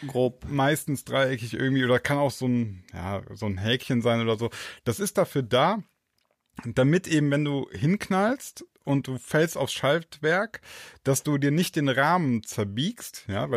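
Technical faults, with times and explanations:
No technical faults detected.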